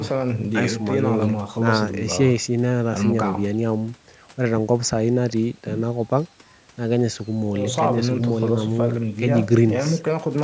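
Speech clip with no technical faults heard.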